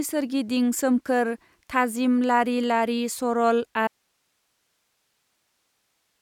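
A speech recording that cuts off abruptly at 3.88 s and never recovers: from that point to the end there is only a thin bed of hiss, sitting roughly 50 dB below the level the speech had been running at. This is an audio dropout to a faint residue, not a pause or fade, since the drop is instant and the noise floor stays live. The likely cause is a break in the signal feed upstream while the later stages of the chain kept passing their own noise.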